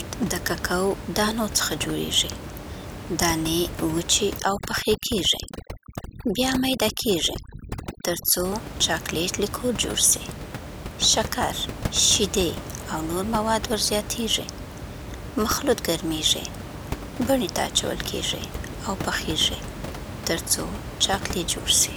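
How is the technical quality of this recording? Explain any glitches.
The recording has one clear glitch, an episode of overdone noise removal between 4.39 and 8.45 s, starting right after "دانې وچې" and clearing by "چاکلیټ لیکور جوړ سي". Here a noise reduction stage pushes far too hard against the room noise, which sits about 10 dB below the speech. It drives individual frequency bands down or out whenever they come near its noise estimate, taking the softer parts of the speech with them. The background drops and breaks up into twinkling, warbling specks.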